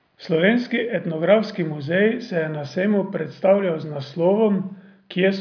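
No technical fault can be heard anywhere in the audio. There is nothing to mark at any point in time.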